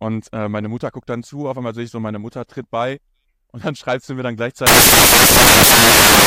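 At 4.67 s, after "schreibst du mir dann", samples built from the wrong bytes take over until the end. Misassembled bytes make low bits dominate. Loud, harsh broadband noise results.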